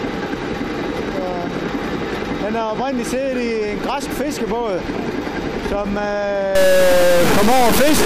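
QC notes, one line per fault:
6.55–8.05 s, stuck bit: from 6.55 s to the end of the clip the sound breaks into a buzzy distortion laid over the signal, with noise filling any pauses as well. The cause is likely a single data bit held at a fixed value, from a broken line or converter. About half of the samples are then shifted by that bit's weight, a step of around -10 dBFS, which points to a high-order bit. The errors follow the waveform and flip with the sign of small values, so they never go quiet.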